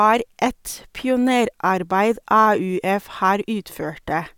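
No technical faults can be heard anywhere in the speech.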